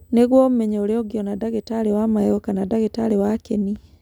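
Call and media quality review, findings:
USB whine, 0.00 to 2.37 s: fixed high-pitched tone at 8 kHz, strongest at its 16 kHz harmonic, sitting about 45 dB below the speech. Probable component: USB audio interface or its host port. Mechanism: current drawn in 125 µs bus microframes leaking into the analogue path through shared power or ground. Whine stops at 2.37 s.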